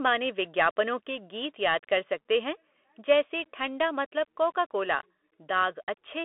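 The whole clip of speech passes through a Bluetooth CVSD headset codec, which encodes the signal one bit per sample as an up-or-down step whose size adapts to the signal. The band is confined to roughly 250 Hz to 3.5 kHz, and nothing reaches above 3.8 kHz. The damage is plainly audible: sibilants turn scratchy and a granular hiss sits under everything. On a spectrogram, energy stops in a hard ceiling near 3.8 kHz, with a grainy noise floor across the passband.

Between 1.68 and 1.73 s, just after "के गीत" and before "कर सकते हैं", a microphone overload cuts the tops off the peaks, most likely because the input gain was set too high for the converter. The peaks exceed full scale by about 2 dB, and only a small fraction of samples are affected, so the result is a brief harsh crackle. The waveform shows flattened plateaus on the peaks.

A second microphone overload follows from 3.1 to 3.13 s, right after "कर सकते हैं". 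It is stronger, at about 3 dB over, and around one sample in twenty is squared off. The crackle is rougher, with wider flat tops on the waveform and a smear of distortion harmonics in the spectrogram.

At 6.24 s, at the very end, the microphone volume is stepped down by about 2 dB. This is likely the call software reacting to the earlier clipping by lowering the input level in one move. The level drops abruptly, which shows as a sudden narrowing of the waveform envelope and a slight uniform darkening across all bands of the spectrogram.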